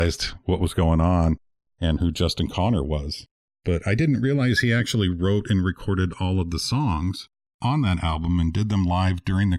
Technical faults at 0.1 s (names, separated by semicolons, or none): channels drifting apart